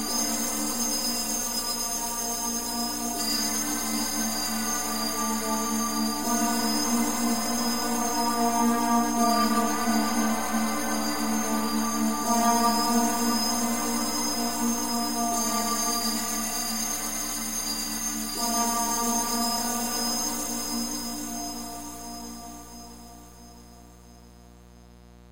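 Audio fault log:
Throughout: mains buzz, a steady raspy buzz some 25 dB below the sound, built on 60 Hz with harmonics reaching several kHz. Sharp switching spikes at each half-cycle cause it, and that upper spread distinguishes it from smooth, low mains hum.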